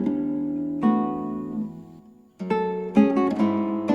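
Nothing technically wrong can be heard in this audio. The sound carries on steadily with no audible disturbance at any point.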